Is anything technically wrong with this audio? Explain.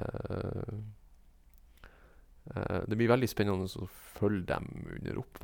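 No, nothing technically wrong turns up anywhere in this recording of speech, so there's nothing to flag here.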